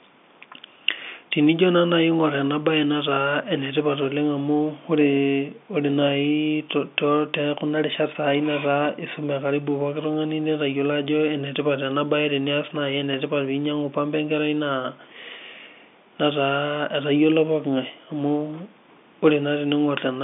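Speech carried over G.711 telephone coding, confined to the telephone band of roughly 200 Hz to 3.6 kHz with nothing above about 3.7 kHz, and no technical faults can be heard.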